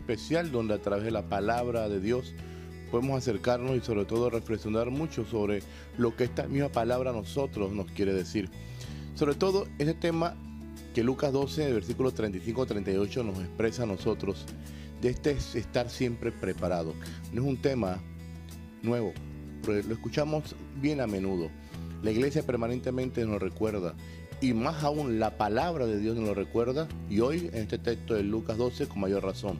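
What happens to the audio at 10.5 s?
Nothing goes wrong at 10.5 s; the audio plays through that moment intact, with no dropout, click, distortion or other fault.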